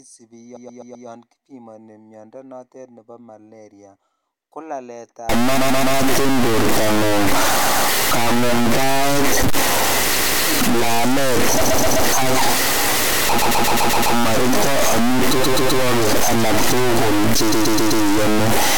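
From 0.55 to 1.07 s the speech stutters with repeated frames: a 128 ms block replays four extra times, adding 512 ms. On a waveform the same short shape recurs side by side, and a spectrogram shows identical slices tiled in a row.

From 5.29 s to the end, distortion sets in, and pauses fill with hiss, most likely from a stuck bit forcing one data bit to a fixed value. The waveform looks jagged and offset in steps, and the spectrogram shows broadband noise smeared through gaps.

The same stutter returns at 5.57 to 5.95 s (three extra plays), 7.62 to 7.87 s and 10.15 to 10.41 s (two each), 11.65 to 12.03 s (three), 13.38 to 14.14 s (six, adding 768 ms), 15.42 to 15.81 s (three) and 17.51 to 18.03 s (four).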